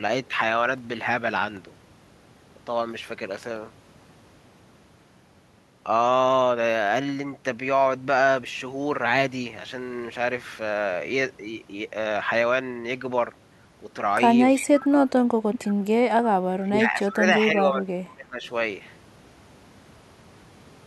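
From 14.54 to 15.85 s, the speech dips by as much as roughly 25 dB. This is likely speech suppressed in double talk, with the echo canceller ducking the talker. Between 15.54 and 15.58 s, a copy returns about 315 ms late, roughly 10 dB below the speech. That points to a likely echo leak. From 16.56 to 18.43 s, the speech drops again, by up to roughly 20 dB. Double-talk suppression is the likely cause here too.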